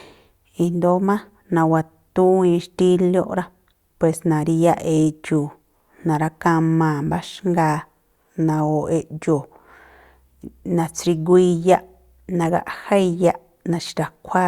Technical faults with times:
none

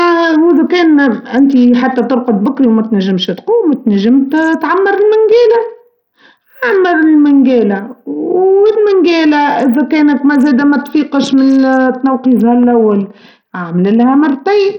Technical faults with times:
0.00-14.78 Bluetooth SBC compression

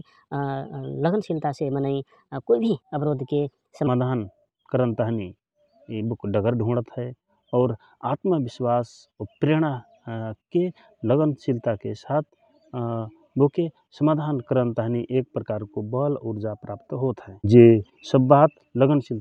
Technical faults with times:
0.00-3.87 section at the wrong speed

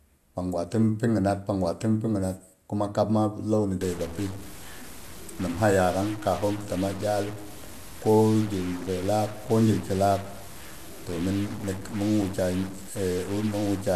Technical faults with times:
3.81-13.95 stuck bit

